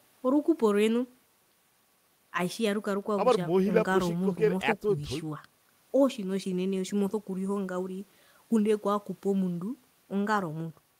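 A speech recording, with nothing technically wrong with it.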